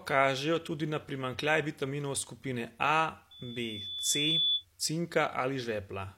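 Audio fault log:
3.31–4.65 s, loudspeaker feedback squeal: a single tone near 3.4 kHz swells over about a second into a squeal, ending up around 5 dB louder than the speech, then stops at 4.65 s. A microphone was picking up the loudspeaker it was driving, and at that one frequency the round-trip gain went above unity, so the tone kept reinforcing itself on each pass.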